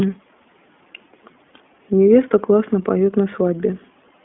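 Speech passes through the iLBC codec for its whole length. Nothing above 3.6 kHz survives, and the plainly rough, synthetic grain fits 15.2 kbps coding of independent 20 ms frames. A plain 200 Hz to 3.4 kHz telephone filter would narrow the band cleanly, without that grain.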